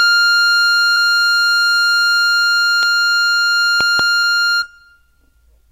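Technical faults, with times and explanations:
0.96 s, compressed frames skipped: the music jumps ahead about 50 ms, consistent with two frames of roughly 26 ms each. Overlapping frames smear the join into a soft blip, seen as a faint vertical smudge with no sharp waveform edge.
4.22 s, compressed frames skipped: a larger jump of about 70 ms, roughly three frames, is lost. The music lurches forward with a brief smeared blip. The spectrogram shows a slight discontinuity in the harmonic lines, not a clean spike.
2.83–2.85 s, loud pop: a single sharp pop, likely a voltage step from a plug, switch or static, rises about 5 dB above the music, which carries on underneath. The waveform shows a narrow spike, and the spectrogram shows a thin full-band vertical line.
3.81–4.01 s, loud pop: two pops in quick succession, peaking about 10 dB above the music. Each appears as a tall waveform spike and a bright broadband stripe on the spectrogram.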